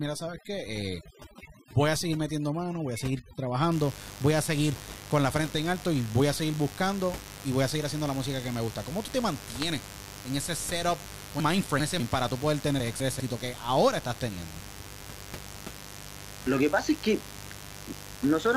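Spanish speech with a 50 Hz mains buzz running the whole 19 seconds, sitting fairly high at roughly 15 dB below the speech and slightly above the room noise, which stays about 18 dB down. The raspy tone comes from sharp switching spikes, likely from a dimmer, rectifier or unshielded cable, entering twice per mains cycle. On a spectrogram it shows as unbroken horizontal lines at 50 Hz and its multiples reaching into several kHz. The waveform carries small spikes 100 times a second.

From 0.0 to 3.7 s, just before "voy a seguir con", there is overdone noise removal. The reduction was set so hard that frequency bands near the noise estimate are pulled down or cut entirely, taking the softer parts of the speech with them. The background drops and breaks up into twinkling artefacts. A spectrogram shows a blotchy, hole-riddled pattern with isolated specks scattered through the gaps.

Three stretches suffer from chunks out of order, with 200 ms blocks played after the material that should follow them. 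From 11.4 to 12.0 s a block is two chunks late. From 12.8 to 13.2 s, between "para tú poder tener" and "que ahora estás", a block is one chunk late, and the same happens from 14.6 to 15.0 s, right after "que ahora estás". Nothing is missing, but the order jumbles, and each swap leaves three hard joins. These appear as abrupt waveform discontinuities and thin vertical broadband lines on the spectrogram.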